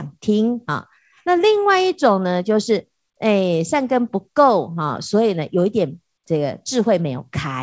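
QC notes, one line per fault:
No faults found; the speech comes over a wideband call path with nothing above 8 kHz, which fits a G.722 codec.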